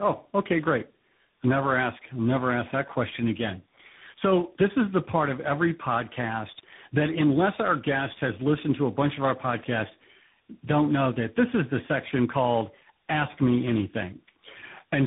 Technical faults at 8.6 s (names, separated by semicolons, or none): tandem speech coding